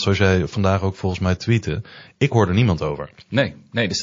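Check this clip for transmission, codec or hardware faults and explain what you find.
One codec fault runs through the whole clip: likely MP3 compression at a starved bitrate near 32 kbps, cutting treble and toggling weak frequency lines, leaving speech watery, swirly and dull, with chirpy s sounds.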